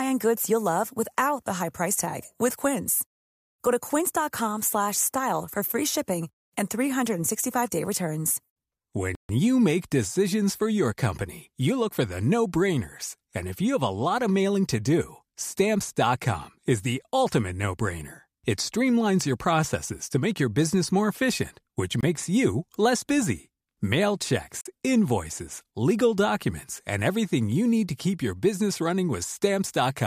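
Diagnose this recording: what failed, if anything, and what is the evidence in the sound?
Bluetooth stall at 9.15–9.29 s, 22.01–22.05 s and 24.61–24.67 s: the speech cuts to silence for 142 ms, 23 ms and 44 ms, then resumes. The likely cause is at the wireless link, where interference delayed packets and the headphone buffer ran dry until retransmissions arrived.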